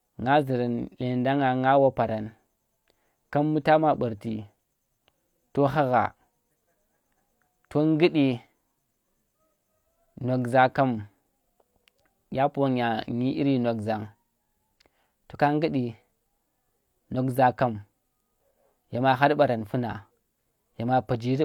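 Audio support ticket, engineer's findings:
No faults found on listening; nothing to attribute to any component and no action required.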